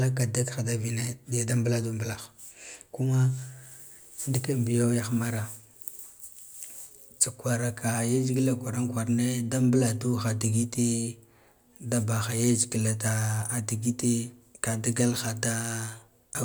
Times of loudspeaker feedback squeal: none

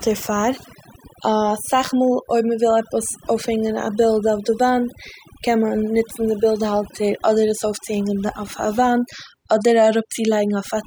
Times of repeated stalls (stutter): none

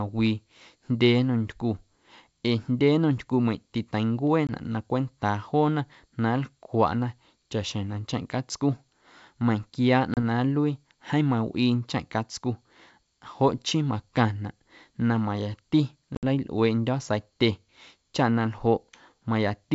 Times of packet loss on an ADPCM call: 4.47-4.50, 10.14-10.18, 16.15-16.24

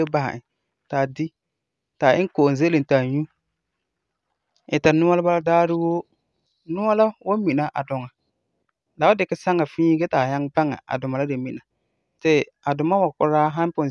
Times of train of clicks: none

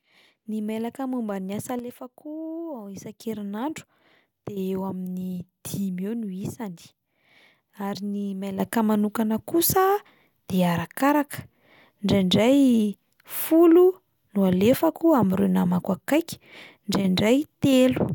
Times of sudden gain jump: 1.79-3.21, 8.60-18.15

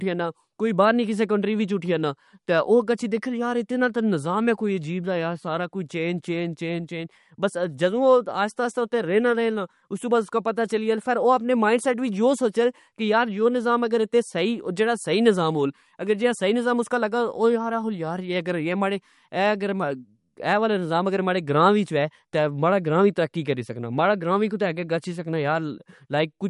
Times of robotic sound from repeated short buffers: none

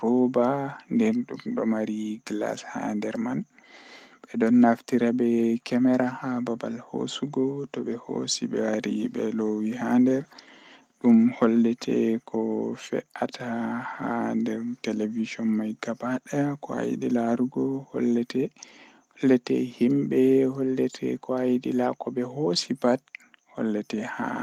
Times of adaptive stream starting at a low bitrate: none

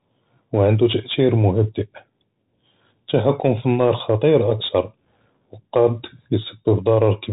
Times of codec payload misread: none

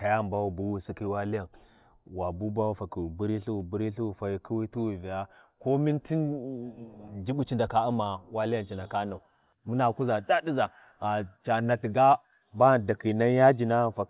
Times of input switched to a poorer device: none

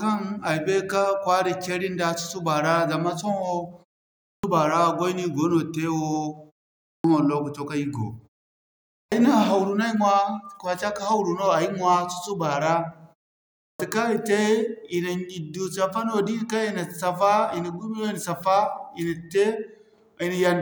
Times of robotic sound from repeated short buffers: none

